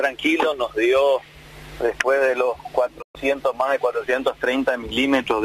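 A digital broadcast dropout at 3.01 s: the receiver lost frames and muted, fading over 20 ms, leaving waveform and spectrogram blank until 3.17 s.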